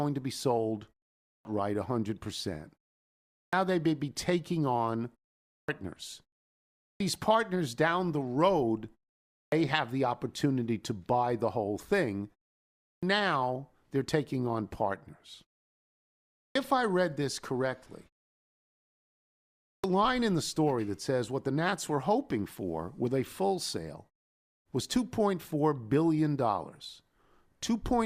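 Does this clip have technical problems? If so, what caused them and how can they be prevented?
Yes, clipped start after a pause at 1.24, 3.32, 5.48, 6.81, 9.33, 12.83, 16.38 and 19.66 s: the output device sleeps during pauses of 0.39 to 1.65 s and wakes late, swallowing 0.17 to 0.21 s of onset, as before "they may be taking". Disabling device power-saving or keeping the stream open through silence prevents it.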